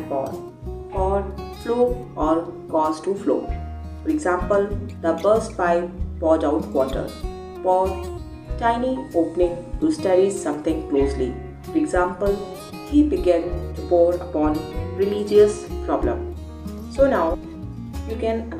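No technical faults are audible anywhere in the audio.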